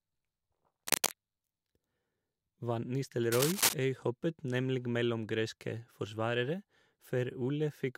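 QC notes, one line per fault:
0.87–1.13 s, cable scratch noise: a dense, uneven burst of scratching and rustling sits over the speech for about a quarter of a second. It is roughly as loud as the speech itself. This is likely a worn cable or connector being moved. Its contact resistance jumps about rapidly, and that injects ragged noise.
3.31–3.73 s, cable scratch noise: a longer burst of the same rough scratching, about 0.4 s, again at about the level of the speech. It ends just before "øyhoppet nemlig mellom greske".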